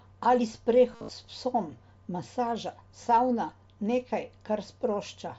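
From 0.92 to 1.09 s there is concealed Bluetooth headset packet loss. Most of that 165 ms stretch, about 135 ms, never arrived. The receiver refilled each gap by repeating matching waveform. The longest run, 60 ms, holds as a buzzy tone, then warbles as real speech resumes through the mSBC link.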